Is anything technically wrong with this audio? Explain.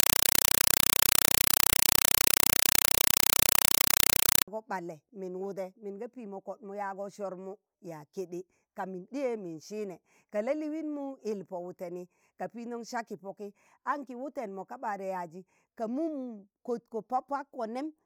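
Yes. From 0.0 to 4.48 s, a compressed stream is played as audio. An undecoded Dolby Digital bitstream is treated as samples, producing loud chattering static in 4 ms bursts repeating 31.25 times per second.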